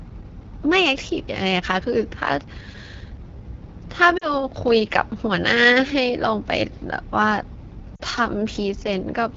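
Right from the start the whole clip carries the AMR wideband (HD Voice) codec at its rough end. The raspy, buzzy texture on the speech points to one of the lowest AMR-WB rates, which fits 8.85 kbit/s, where the vocal tract model can't keep up.

Then there are lost AMR speech frames at 4.17 to 4.29 s and again at 7.96 to 8.01 s. Each dropout sounds like a brief smeared warble that sags in level, which fits about 40 ms of missing frames that the decoder patched by repeating its last settings at fading gain.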